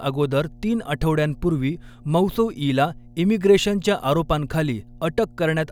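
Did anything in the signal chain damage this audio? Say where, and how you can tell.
Yes, mains hum enters in the analogue wiring: a steady 60 Hz tone, roughly 25 dB below the speech, runs throughout, from a ground loop or nearby transformer.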